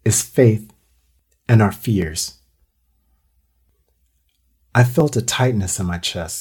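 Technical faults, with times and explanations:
2.02 s, 5.00 s and 5.82 s, dropped samples: three single sharp clicks, the first just after "and our", each likely caused by well under a millisecond of samples going missing so the waveform jumps straight to a later value. That step is a thin vertical line across the spectrum. Unlike a dropout, no sound is lost and there is no audible gap. Unlike a pop from a DC step, there is no low thump.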